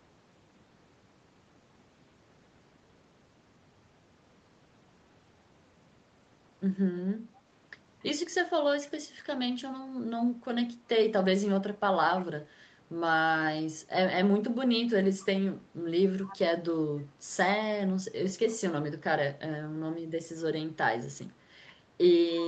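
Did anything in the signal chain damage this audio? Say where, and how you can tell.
Yes. A faint delayed copy of the speech surfaces at 8.81–8.91 s and again, much louder, at 16.27–16.37 s, both trailing by 273 ms. This is an echo leak in call processing, likely a loudspeaker's pickup slipping past the echo canceller.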